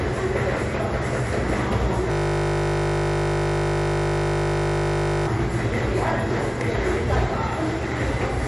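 Throughout the clip, the audio was likely squeezed through MP3 compression with too few bits to go round, which fits a low bitrate near 48 kbps. With bits scarce, the encoder has dropped all treble above 11.3 kHz and discarded weaker frequency lines that flicker in and out between frames. The result is plainly audible: a dull top end, a watery, swirling texture, and softened transients where sharp attacks should be.

From 2.12 s to 5.27 s, a system hang loop takes over. The computer or its audio driver stalled while the sound hardware kept replaying the same 20 ms stretch of its ring buffer, 158 times in a row. Because each repeat is so short, the loop fuses into a steady, mechanical buzz at 50 Hz. The sound that was playing freezes into that drone until the system recovers at 5.27 s.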